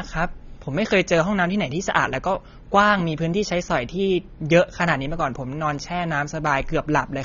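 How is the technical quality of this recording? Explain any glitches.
The quality is poor because of AAC compression throughout. Throughout, the speech has likely been squeezed through AAC-LC at a very low bitrate, roughly what 24 kbps would give. The encoder starves the upper frequencies, so sibilants turn fizzy, high end drops away, and sustained sounds warble with a dull, smeared texture.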